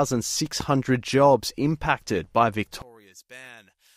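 A loud pop at 0.60 to 0.63 s, just before "jobs impacted by", cuts sharply through this speech clip, peaking a few decibels above the voice while the speech carries on underneath. It sounds like a single pulse, most likely a voltage spike from a plug, switch, static discharge or driver glitch that entered the signal chain and was shaped by the circuits after it into one brief thump. One channel inverted from 2.82 s to the end, right after "jobs impacted by", makes the speech collapse by about 27 dB when heard in mono. One side's polarity is likely flipped, so the centred voice, identical in both channels, cancels when they are summed, leaving only a faint residue from the small differences between left and right.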